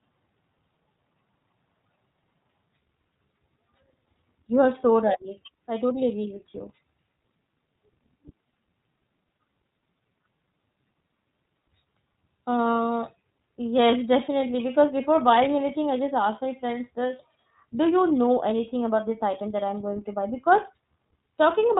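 Throughout, iLBC codec damage is plainly audible: nothing above 3.8 kHz survives, and a rough, synthetic grain that a simple low-pass wouldn't add fits 30 ms frames.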